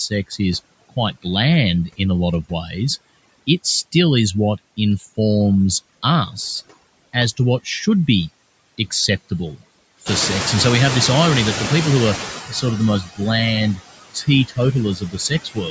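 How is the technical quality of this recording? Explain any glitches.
The recording is heavily over-processed by noise suppression, and it's most obvious in how the speech and background interact.

Overdone noise removal runs through the whole clip. The reduction is set so hard that any frequency band close to the noise estimate gets pushed almost to nothing. The gaps go eerily quiet with little twinkling specks.

On top of that there are noise suppressor artifacts throughout. The suppressor pulls noise down by about 21 dB frame by frame, so the background dips away between phrases and swells back up underneath the speech.

Speech cut by the noise suppressor happens at 0.1–1.25 s, 1.89–3.94 s, 6.31–8.08 s, 8.78–10.08 s, 12.49–13.2 s and from 13.76 s to the end. The suppressor mistakes soft consonants and word endings for noise and drops them by up to about 21 dB. Most stretches lose roughly a fifth of a second in total, the one at 8.78–10.08 s about a tenth, and the last one loses more, so bits sound swallowed.

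There's also a noise suppressor catching-up effect from 10.05 to 12.41 s. Right around 10 s the room noise jumps by about 15 dB, and the noise estimate lags behind it. At first the noise gets only about 11 dB of reduction, then it sinks over about 2.4 s as the estimate adapts.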